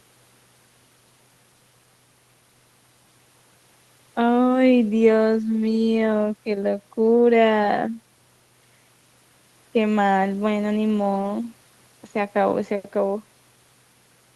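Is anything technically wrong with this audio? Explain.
No, nothing is technically wrong: the speech has been carried over a call link in the normal way, with its high-frequency content stopping around 12 kHz as that route's codec would be expected to allow, and nothing in the signal departs from how such a call ordinarily sounds.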